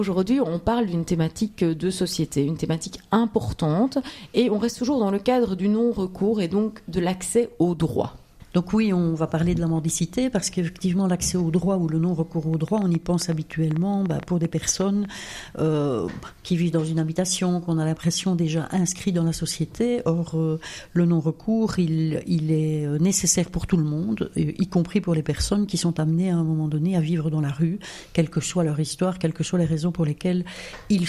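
From 12.54 to 15.06 s, something injects repeated pulses into the signal, likely interference from nearby equipment or a faulty connection or power supply. The result is a train of clicks: about twenty similar pops at about 6.8 per second, unevenly spaced, ticking a few decibels above the sound.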